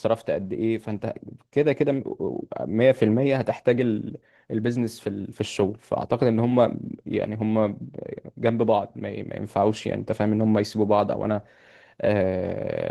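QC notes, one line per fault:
Throughout: Opus voice compression. The speech sounds muffled, hoarse and a bit robotic, which fits hybrid Opus at about 16 kbps coding the excitation coarsely.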